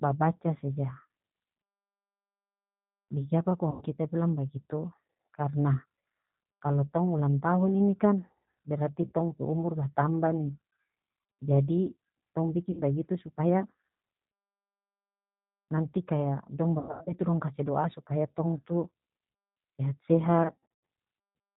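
Speech, carried throughout by the G.729 codec at 8 kbit/s. Nothing above 4 kHz survives, and the voice has the slightly rough, synthetic edge of a coder that rebuilds each 10 ms frame from a filter, a pitch predictor and a few pulses. That edge is what separates it from a plain telephone band-limit, which would sound muffled but clean. VoIP packet loss concealed by the speech codec occurs five times. About 100 ms is lost at 3.71 s, just before "kita bilang", and 60 ms at 9.06 s, before "tong pe umur batambah". Another 60 ms goes at 12.71 s. Around 240 ms is scattered over 280 ms from 16.79 s, between "nanti kaya" and "itu dong kase do'a". About 280 ms is scattered over 400 ms from 20.43 s. In each, the gap is filled with a stretched continuation of the last sound that fades, not with silence or a click. The voice stays weak for a moment after it returns. That tail is what distinguishes codec concealment from a simple dropout.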